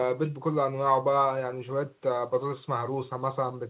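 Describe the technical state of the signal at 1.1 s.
At 1.1 s the speech is intact, carried through the call path with its content stopping at 4 kHz, which fits narrowband G.711 telephone coding.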